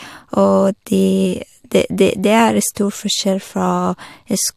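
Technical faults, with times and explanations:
No technical faults are audible in this speech recording.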